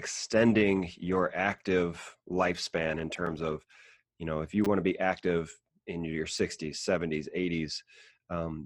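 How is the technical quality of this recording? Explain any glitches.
Quality is uneven. A stretch of reduced bitrate and several brief repeated-buffer glitches disturb the speech.

From 1.99 to 4.0 s, the adaptive stream switches to a lower bitrate, ending just before "you know if you". Codec artefacts rise. This fits a drop from 64 to 16 kbit/s Opus.

Repeated buffers occur at 1.59 s, 3.27 s, 4.65 to 4.67 s (between "you know if you" and "want to be active"), and 6.38 s. Late audio made the device replay its last buffer. Each is heard as a click or brief buzz, which fits a 5 ms buffer.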